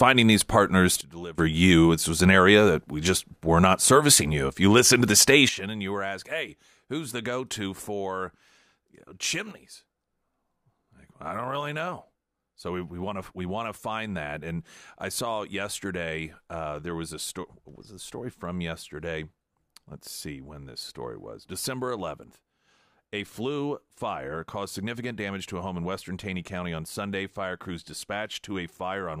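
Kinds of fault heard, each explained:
Sudden gain jump: speech and background noise drop together instantly, by about 18 dB, then about 14 dB, with no gradual fade; likely an unramped gain change.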